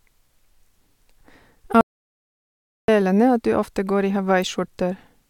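A short speech recording with one clear problem: an audio dropout to silence running from 1.81 s to 2.88 s. The speech cuts off mid-flow and comes back just as abruptly, and in between there's nothing at all, not even room tone, so about 1.07 s of whatever was being said is simply gone. That dead-flat gap is the giveaway that the input was likely lost for a moment while the recorder kept writing silence.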